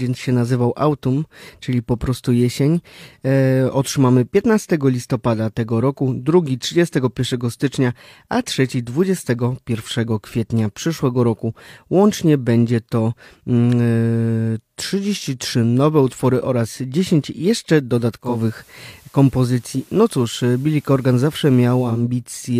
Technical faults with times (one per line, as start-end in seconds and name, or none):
18.19-22.07 digital radio blending to analogue